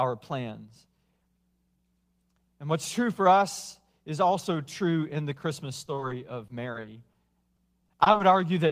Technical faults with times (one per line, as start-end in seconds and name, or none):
5.85-6.12 repeated packet loss (robotic sound)
6.48-7.16 repeated packet loss (robotic sound)
7.56-8.22 repeated packet loss (robotic sound)
8.68-8.71 short concealed packet loss